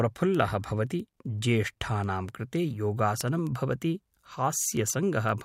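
From 0.22 s to 5.42 s, word clock ticks recur about every 0.15 s. Unlocked clocks drift about 150 ppm apart, dropping or repeating single samples.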